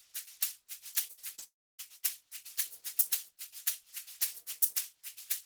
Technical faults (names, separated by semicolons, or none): repeated packet loss (robotic sound); long network dropout